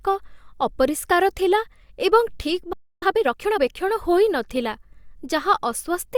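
A playback stall comes first, from 2.73 to 3.02 s: the speech cuts off in mid-flow and the output falls silent for about 290 ms before sound resumes. The abrupt stop and restart suggest that the player likely ran short of buffered data or had its audio thread held up, so it had nothing to hand to the output until the supply was restored.

A time-compressed catch-up follows straight after, from 3.02 to 3.60 s. To work off the backlog left by the stall, the player trims out small slices of audio and cross-fades across the joins, so the speech runs at roughly 1.5 times its normal rate. Pitch stays where it belongs, but the delivery sounds rushed until normal pacing returns.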